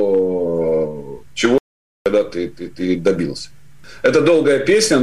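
At 1.58 s the sound cuts off abruptly into silence until 2.06 s, an audio dropout to silence of about 0.48 s. The input was likely lost while recording continued. Unlike a quiet pause, no room tone or noise floor remains, and the material is simply missing.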